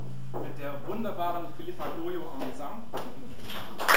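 Throughout the clip the sound carries imaging from sample-and-hold upsampling: a bright metallic fizz, about 16 dB below the signal, fills 8 to 16 kHz. It mirrors the content below 8 kHz, which fits each sample being repeated without smoothing when converting from 16 kHz to 48 kHz.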